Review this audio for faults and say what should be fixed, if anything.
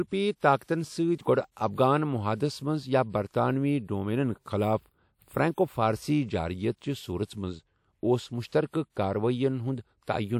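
Pre-echo: a short hiss comes just before sharp speech onsets at 0.58 to 0.61 s, 0.63 to 0.68 s and 8.48 to 8.52 s, each lasting 37 to 49 ms. Codec noise sized for each loud attack spreads back into the quiet moment before it and softens the attack. On a spectrogram this shows as a pale broadband smear just before each onset. The waveform shows low fuzz where there should be near-silence. Encoding with short transform blocks around transients would prevent it.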